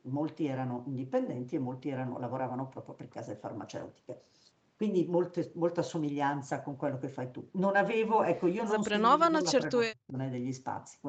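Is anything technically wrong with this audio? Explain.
Yes. From 8.9 to 10.17 s the speech dips by up to about 30 dB and breaks up for about a second in total, likely speech suppressed in double talk by an echo canceller.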